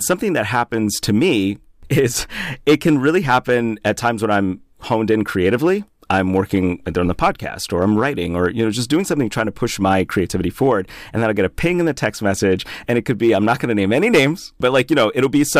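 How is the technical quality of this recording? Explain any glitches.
The recording has hard clipping that runs through the whole speech clip. The signal was driven about 4 dB past what one stage in the chain could pass. Peaks beyond that ceiling were sliced off flat. Only around one percent of samples hit the limit, so the damage sits on the loudest moments. Those flattened tops create high harmonics. You hear brief crackle and grit on peaks rather than constant fuzz.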